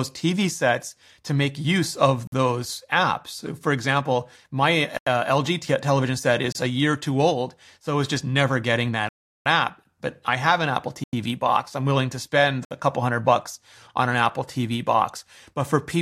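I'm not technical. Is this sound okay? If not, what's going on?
No. The speech drops out six times in a fault called a block of digital silence: at 2.27 s, 4.97 s, 6.52 s, 9.09 s (the longest, about 0.37 s), 11.04 s and 12.65 s. The others last between about 0.03 and 0.09 s. Each is a stretch where the audio is briefly replaced by complete emptiness. Unlike a natural pause, it starts and stops abruptly, with no fade.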